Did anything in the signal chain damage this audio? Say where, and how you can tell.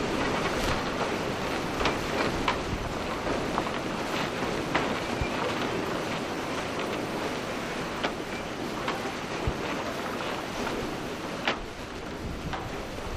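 Yes. USB whine from 6.34 to 8.46 s: current drawn by the USB bus in 1 ms frames leaks through shared power or ground into the analogue wiring. It is heard as a steady 1 kHz tone, about 25 dB below the signal.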